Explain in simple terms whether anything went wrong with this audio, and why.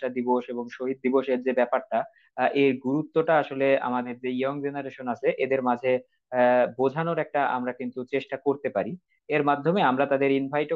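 Nothing went wrong; this recording sounds as it should.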